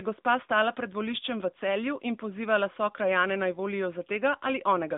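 Speech passed through the AMR narrowband mobile codec across the whole clip, at a damage level that fits a mid-rate mode near 10.2 kbps. Nothing survives above 3.8 kHz, the line band runs roughly 200 Hz to 3.7 kHz, and the synthetic vocal-tract model leaves a plainly audible buzzy, processed quality.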